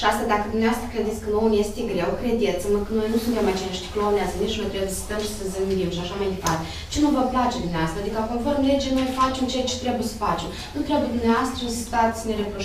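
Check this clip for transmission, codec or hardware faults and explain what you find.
Checking this clip, I find no faults to explain.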